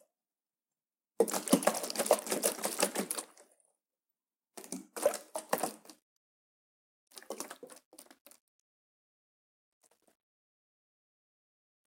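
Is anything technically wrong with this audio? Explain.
Yes, there's truncation distortion on the fade-out. From about 5.94 s to the end at 11.86 s, the level stage isn't keeping enough resolution and adds no dither. The grit fits roughly an 11-bit word length. As the level drops toward the last few steps, the waveform collapses into coarse square steps. From about 7.5 s onward it gets rough and grainy instead of tailing off cleanly.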